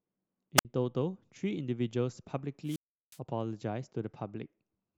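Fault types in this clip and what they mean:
Wireless microphone squelch dropout: The speech twice gives way to a short surge of hiss and then a hole of near silence before it comes back. The first, at 0.57 to 0.65 s, mutes for about 58 ms. The second, at 2.64 to 3.19 s, holds a 364 ms gap. In each case the radio link from an analogue FM microphone faded so far that the receiver's squelch closed and cut the output until the signal recovered.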